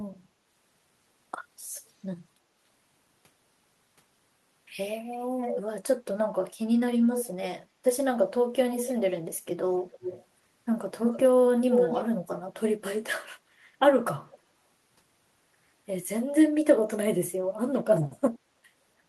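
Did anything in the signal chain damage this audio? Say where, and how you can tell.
Yes, there is echo leak from call processing at 5.51, 7.13, 8.71, 9.92, 11.02, 11.7 and 14.32 s. A spectrogram shows ghost harmonics trailing the speech by 295 to 309 ms, ranging from about 30 dB down to level with it. The likely cause is a far-end speakerphone whose echo canceller let its pickup through.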